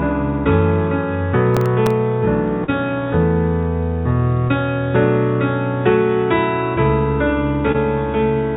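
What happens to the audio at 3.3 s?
Nothing goes wrong at 3.3 s: the audio there is intact, carried through the call path with the narrowband sound you would expect from a telephone-grade codec, with nothing above 4 kHz.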